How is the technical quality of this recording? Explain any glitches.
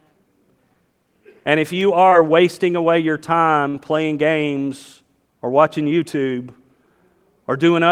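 The recording has two packet-loss dropouts, both in the speech.

Short concealed packet loss at 2.09 to 2.13 s, between "if you" and "wasting away your": about 30 ms of audio arrived too late for the decoder, so the receiver stretched the preceding sound across the hole and blended back, leaving a brief smear or wobble.

Burst of packet loss at 3.69 to 3.74 s, after "wasting away your" and before "playing games or watching": roughly 50 ms went missing in one run. The receiver carried the last sound forward while fading it, giving a short held buzz or hiss before the speech jumps ahead.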